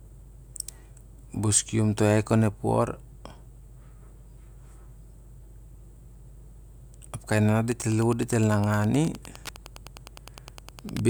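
Speech, with Wi-Fi interference from 7.65 s to the end of the clip: a steady ticking at a 102.4 ms period, roughly ten clicks per second, sitting well below the speech at around 25 dB down. The cause is a Wi-Fi radio close to the audio circuitry. Each beacon the radio transmits is picked up and rectified by the circuit, turning the radio-frequency burst into an audible click at the beacon rate.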